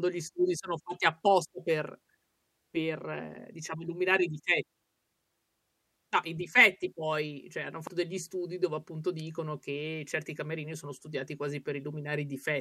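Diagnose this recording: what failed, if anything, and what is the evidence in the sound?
At the codec stage, compressed frames were skipped: at 7.87 s about one whole frame of the encoded speech, roughly a tenth of a second, never reached the output. The speech jumps abruptly forward there.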